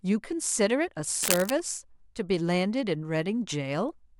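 From 1.23 to 1.50 s there's a burst of cable scratch noise, a rough, uneven crackle roughly as loud as the speech itself. It's likely a worn lead or connector being shifted, its contact flickering and spraying ragged noise over the speech.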